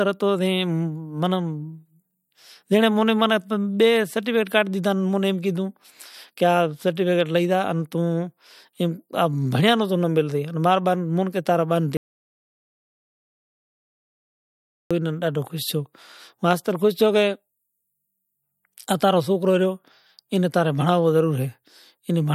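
From 11.97 to 14.91 s the speech drops out to digital silence, likely a lost input, erasing about 2.9 s; the waveform flatlines and the spectrogram goes blank.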